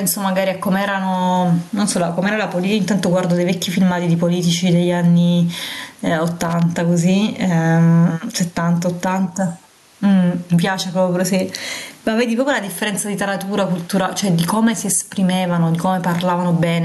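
A speech recording with gain pumping throughout, a swing of around 15 dB, likely from excessive input gain with a fast limiter clamping down. The room noise sits about 41 dB below the speech. From 6.45 to 6.62 s there is a short burst of loose connector crackle, where an intermittent contact chops the signal into irregular scratching.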